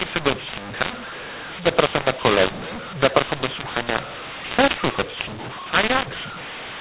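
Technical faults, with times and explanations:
Throughout, mu-law and A-law mixed up: the speech was encoded with G.711 mu-law but decoded as A-law, so each 8-bit code maps to the wrong level. Loudness is scrambled, the voice turns harsh and gritty, and quiet gaps fill with noise.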